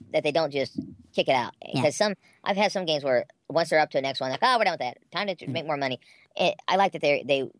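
Playback at the wrong sample rate affects the whole of this speech clip. The combined shift in speed and pitch fits audio recorded at 16 kHz being played at 22 kHz without conversion, so everything runs 1.38 times too fast and sounds 5.55 semitones high, leaving the voice squeaky and hurried.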